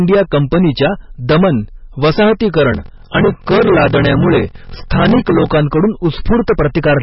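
From start to finish the speech is hard clipped: peaks were driven about 14 dB past what a stage could pass, so roughly one sample in seven is sliced flat. That gives fuzz on every loud syllable, and the flattened tops add fresh harmonics high up, unlike codec damage, which removes detail rather than adding it.

Also throughout, there is heavy watery, swirling smearing, and nothing is left above 5.6 kHz. That fixed treble ceiling, with weak spectral detail flickering in and out, points to likely MP3 encoding at a very low rate, fitting roughly 19 kbps. It is a loss of content, not added edge.

From 2.70 to 5.54 s, a block size mismatch with padding sets in. Each block arrives short and is topped up with silence before the next stage reads it, fitting 1024-sample reads. The result is a steady 43.1 Hz buzz, and the speech is stretched to 0.861 of its speed. Those regularly spaced gaps separate it from random dropouts.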